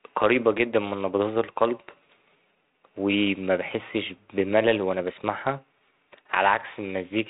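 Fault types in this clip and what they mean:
No faults detected in the speech here; the narrow telephone band, with nothing above 3.9 kHz, is the normal behaviour of the path.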